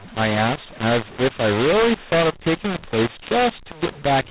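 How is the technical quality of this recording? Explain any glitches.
Poor: the speech is harsh and distorted throughout. It is still narrowband telephone audio, with nothing above 4 kHz. The cause is a mu-law and A-law mix-up. Throughout the clip, audio coded as mu-law is decoded as A-law, which scrambles sample levels. The result is gritty distortion, with pauses filled by noise rather than silence. That noise in the gaps is what distinguishes it from ordinary clipping.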